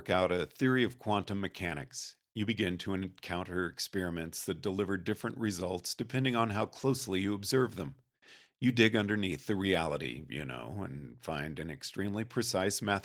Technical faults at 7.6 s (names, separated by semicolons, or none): none